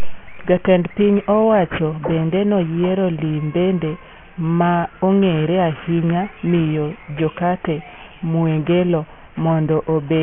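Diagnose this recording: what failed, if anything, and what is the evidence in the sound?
Sibilants and fricatives sound gritty and metallic from start to finish, with harsh tones that don't belong to the speech and a spectrum that runs hard right up to a 3 kHz edge. This is aliasing at the sample-rate conversion stage: the audio was taken down to a much lower rate, which fits a 48 kHz to 6 kHz drop, without an anti-alias filter. Content above 3 kHz folded back below it, landing about 20 dB under the speech.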